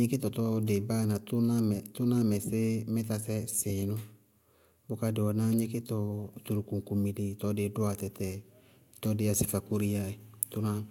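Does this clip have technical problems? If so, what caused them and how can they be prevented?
No, there are no technical faults in this speech recording, so nothing needs fixing or preventing.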